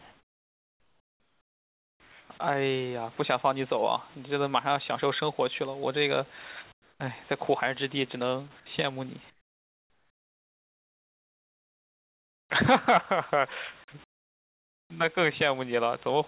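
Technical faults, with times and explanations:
0 to 2.3 s, 6.72 to 7.0 s, 9.3 to 12.5 s and 14.04 to 14.9 s, comfort noise in place of the background: in each pause the real room noise, sitting about 30 dB under the loud parts, gives way to a flat, featureless hiss, about 10, 12, 28 and 30 dB quieter respectively. That's likely discontinuous transmission, where the sender goes quiet between phrases and the receiver pads the gap with synthetic noise, all inside a call band that stops at 4 kHz.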